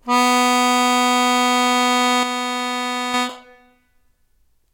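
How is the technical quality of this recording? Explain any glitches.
The recording has one clear glitch in this music clip. From 2.23 s to 3.14 s, the level suddenly falls by about 6 dB for just under a second, then jumps back. This is a case of one channel dropping out. The likely cause is that one stereo channel is lost for that stretch. When the two channels are combined to mono, material common to both drops by half. Anything carried only in the missing channel vanishes until it returns.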